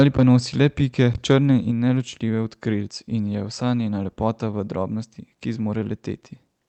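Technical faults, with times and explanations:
0.00–0.23 s and 1.13–1.34 s, microphone overload: the input level most likely ran too hot for the converter, about 10 dB over full scale in the first burst and about 6 dB in the second, so a sizeable share of samples, roughly a sixth to a fifth, hit the ceiling and had their peaks sheared flat. Those squared-off tops add a harsh, crackling buzz to the loudest moments of speech, heard through the bandwidth-limited call path.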